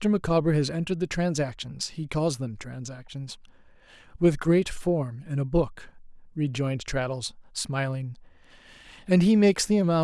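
No technical faults can be heard anywhere in the recording; the signal stays steady and continuous throughout, with no dropouts, interruptions or level disturbances.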